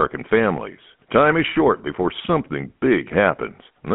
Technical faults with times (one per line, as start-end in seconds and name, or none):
0.00-3.94 GSM full-rate codec